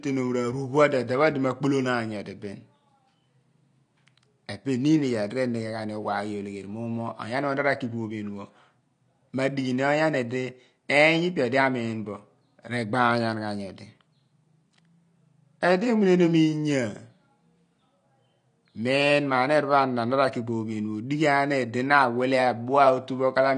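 From start to finish the speech sounds dull and smeared, with a fizzy, warbling texture on sibilants and nothing above 9.8 kHz. This is clearly audible AAC compression damage, likely from AAC-LC at a low bitrate, one that fits roughly 32 kbps, forcing a lowered cut-off.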